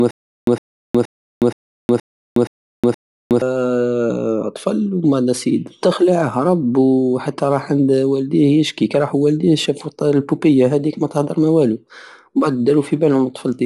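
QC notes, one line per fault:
0.00–3.42 s: stutter with silent gaps. A 108 ms burst, already repeating at the start, returns seven times after 365 ms silences, likely a stalled stream.
Throughout: Bluetooth LC3 compression. Nothing above 11.5 kHz, and a clearly breathy, grainy edge. Likely LC3 coding with 10 ms frames, fitting about 48 kbps.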